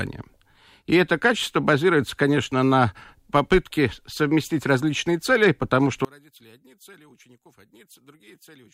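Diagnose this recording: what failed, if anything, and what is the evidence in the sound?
From 6.05 s the speech falls about 30 dB, likely one channel inverted in analogue wiring. Mono summing cancels the shared centre content, unlike a true dropout.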